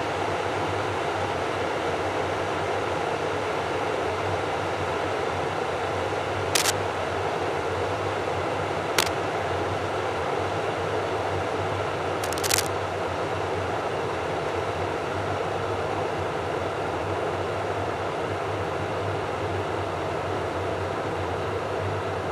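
Brief scratchy, rustling bursts break over the sound at 6.55 to 6.70 s and 8.96 to 9.12 s, somewhat louder than the sound itself, then a longer, roughly level burst at 12.24 to 12.67 s. This cable scratch noise likely comes from a worn connector whose contact resistance jumps as it moves.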